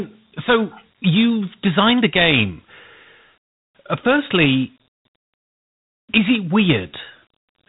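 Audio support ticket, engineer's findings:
Dialogic VOX ADPCM coding, whole clip. Speech band stops near 3.8 kHz. Gritty hiss rides on the speech and tracks its level. Damage plainly audible. Probable component: telephony storage or playback stage saving VOX files. Mechanism: OKI-style ADPCM keeps only a 4-bit step per sample and adapts the step size. Quantisation error becomes signal-following grit. Top cutoff and 32 kbps rate fit 8 kHz sampling at 4 bits.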